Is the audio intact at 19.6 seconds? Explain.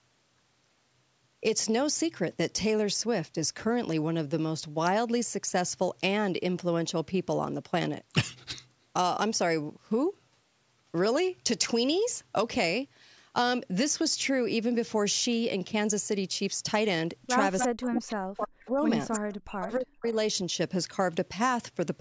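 No. From 19.46 to 20.15 s the echo canceller likely mistook double talk for echo, suppressing the speech, which drops by roughly 40 dB and breaks up.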